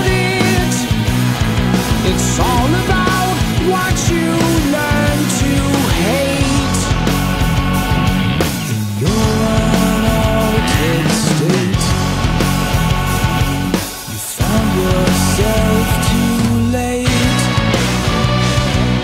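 No technical faults are audible.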